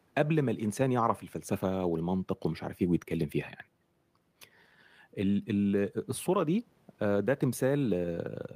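No technical faults can be heard in the speech, and the faint room noise sits about 41 dB below it as part of the original recording.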